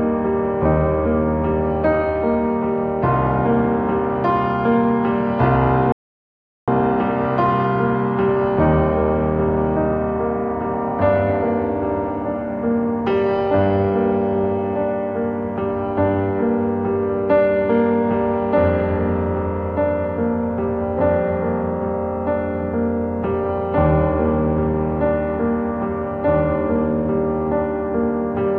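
At 5.92 s the player likely ran short of data or had its playback thread held up, so nothing reached the output until it caught up again. This is a playback stall: the audio cuts to silence in mid-flow and stays dead for about 0.75 s, resuming at 6.68 s. The gap is long enough to register as an obvious hole rather than a click or brief dropout.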